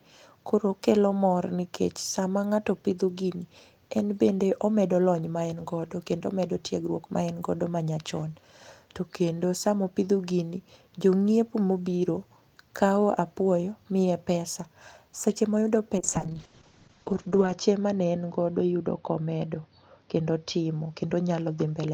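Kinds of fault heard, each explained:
Call bitrate drop: from 16.03 s to the end, the encoder is forced to far fewer bits, consistent with a fall from roughly 32 to 7 kbps. Coarser coding makes the speech rough and watery, and the upper band is cut from 20 kHz to 8 kHz, dulling it.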